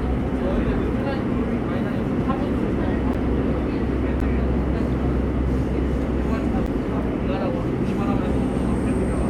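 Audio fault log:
3.14 s, 4.20 s and 6.66 s, block of digital silence: each time the sound drops out for about 11.6 ms, heard as a sharp tick rather than a gap. The signal cuts out and back with no fade, and the hole is too short to register as silence. The identical length each time fits a 512-sample buffer left unfilled when the program missed its deadline.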